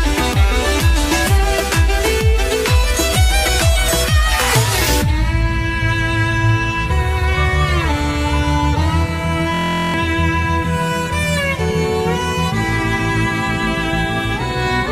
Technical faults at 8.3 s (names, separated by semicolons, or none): none